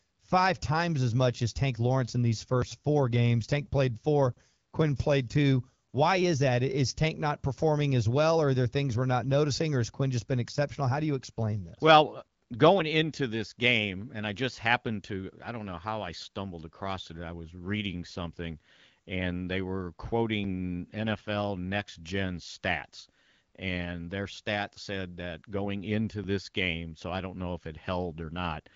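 No faults found: the speech runs through the AMR wideband (HD Voice) codec at 12.65 kbit/s as designed, with the expected band limit leaving nothing above about 7.5 kHz.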